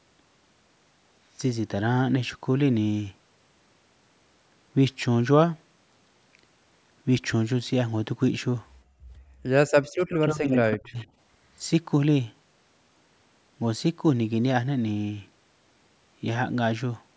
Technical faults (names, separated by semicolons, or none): background gated by the echo canceller; echo leak; speech suppressed in double talk